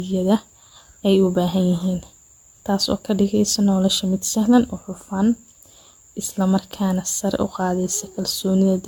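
From start to end, the speech has a swirly, smeared, hollow quality. Consonant attacks blur and lose their edge. Nothing is heard above about 17 kHz. This sounds like generation loss. The audio was likely decoded and re-encoded many times, around seven passes, with a codec whose character fits AAC-LC at 96 kbit/s. Each pass quantised the signal on a shifted frame grid. The noise and spectral gaps compounded beyond what that bitrate alone would produce.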